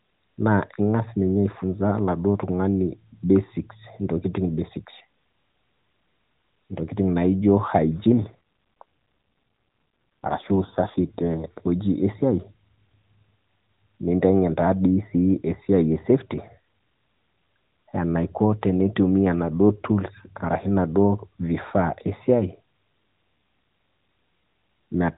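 An AMR rate drop runs from 8.10 to 11.38 s. The speech passes through the AMR-NB mobile codec, which keeps everything below 4 kHz. Over this span the codec falls back to a lower mode, most likely because a weak radio link pushed the bits toward error protection. The sound fits a step from 12.2 down to about 5.9 kbps. The band stays the same and nothing drops out, but the voice turns rougher, buzzier and more synthetic until the higher rate returns.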